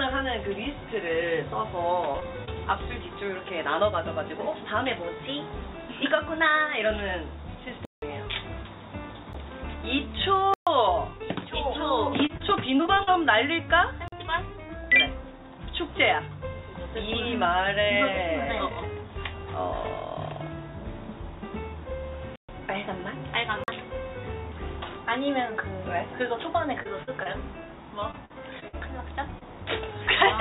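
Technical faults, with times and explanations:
2.12 to 2.49 s, 12.27 to 13.09 s and 26.83 to 29.43 s: repeated packet loss (robotic sound). Packets keep going missing or arriving late, and each hole gets patched by stretching the last bit of audio before the next hole hits. So the sound turns choppy, with pieces gone. It's three short gaps in the first run, eight in the second with the longest around 39 ms, and eight in the last, up to about 51 ms.
7.85 s, 9.33 s, 10.54 s, 14.08 s, 22.36 s and 23.64 s: block of digital silence. A chunk of the audio drops straight to silence and comes straight back with no fade. The longest, at 7.85 s, runs about 171 ms and fits an 8192-sample buffer that never got filled. The ones at 10.54 s and 22.36 s are each 128 ms. Those at 14.08 s and 23.64 s are about 43 ms, which fits a 2048-sample buffer. The 9.33 s one is only about 12 ms, more of a tick than a hole.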